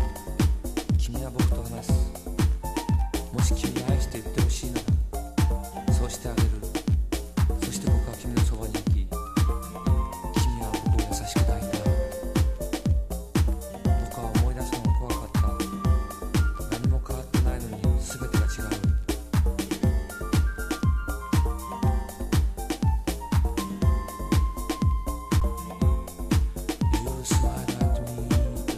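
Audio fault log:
4.10 s, underrun with held sample: the output buffer ran dry for about 7.5 ms and the converter held its last value, so the sound flattens briefly, and roughly 7 ms of live audio went missing.
25.40 s, underrun with held sample: the same freeze, about 11.6 ms long, which fits a 512-sample buffer. About 10 ms of audio is lost.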